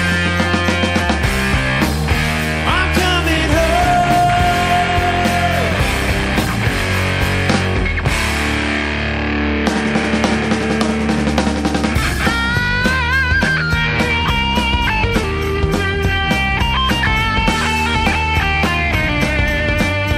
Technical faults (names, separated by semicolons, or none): repeated buffer